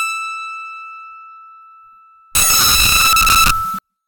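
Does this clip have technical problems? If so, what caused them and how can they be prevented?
Yes. From 2.35 s to 3.79 s the music turns into loud, harsh broadband noise. These are samples built from the wrong bytes: the reader misassembles each sample, either shifted by one byte or with its bytes in the wrong order, so the rapidly changing low bits become the most significant part of every value. On a spectrogram the section is flat, broadband energy across all frequencies. On the waveform it is a dense, high-amplitude block. Reading with the correct byte order and frame alignment prevents it.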